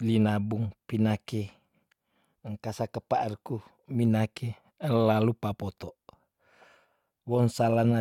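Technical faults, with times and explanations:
No technical faults can be heard anywhere in this speech recording.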